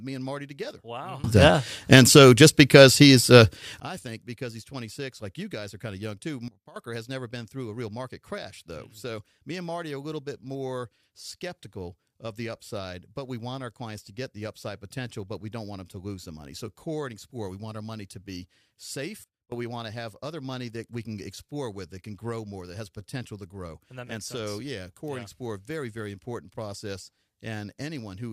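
At 1.24 s the speech and its background noise leap up together by about 22 dB until 3.8 s, then drop by about 14 dB from 6.48 to 6.76 s and about 22 dB from 19.24 to 19.52 s. These sudden gain jumps likely come from gain applied without a ramp.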